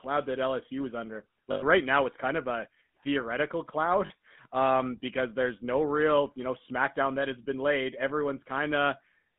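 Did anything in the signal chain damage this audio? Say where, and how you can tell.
Yes. Throughout, the speech has a buzzy, gravelly roughness that is plainly audible, and the band is confined to roughly 150 Hz to 3.5 kHz with nothing above. That is the GSM full-rate codec stage. It fits the 13 kbps full-rate coder, which models the vocal tract and excites it with a sparse, regularly spaced pulse train. The thinned excitation produces the grit, and the telephone line limits the bandwidth.

There are also lost GSM frames, heard at the network stage as brief metallic, ringing holds. The first runs from 1.52 to 1.63 s, after "is under" and before "right now it's kind". It lasts about 100 ms, which fits five lost 20 ms frames. The second runs from 4.06 to 4.11 s, just before "um because there's no", and lasts about 40 ms. In each case the decoder repeats the last good frame's parameters instead of the missing audio.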